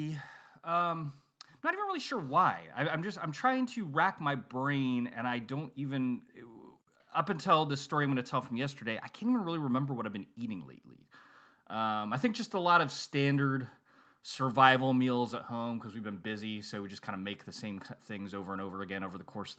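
The automatic gain control misjudges the input as too quiet twice and pushes its gain up. From 0.63 s to 6.7 s, just before "up until this story", the gain climbs by about 8 dB, so the voice and the room behind it swell together. From 15.64 s after "standard survival meals at" to the end, the same automatic gain rising returns, lifting everything in the wideband call audio, which stops at 8 kHz.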